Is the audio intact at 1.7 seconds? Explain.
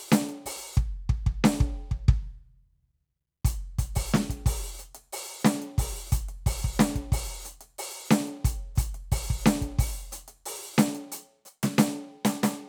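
Yes, the music is intact at 1.7 seconds, with no dropout, click or distortion at that point.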